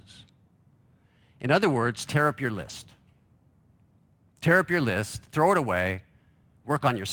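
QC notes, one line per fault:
2.03–7.13 s, sample clock jitter: from just after "other words" to the end, the converter clock wanders by around 5 µs, so each sample is taken slightly early or late. The timing error turns into an amplitude error wherever the waveform changes quickly, giving a rough, hiss-like layer around 30 dB below the speech. It is strongest on loud and bright passages and drops away in pauses, because it follows the signal's slope.
2.61–2.71 s, lost packet rebuilt from error correction: about 60 ms of speech is replaced by a low-bitrate copy that the following packets carried, which fits three separate packets being lost. The decoder plays that copy instead of leaving a gap, so the speech keeps going but turns briefly grainier and noisier. The copy holds much less detail than the full-rate packets.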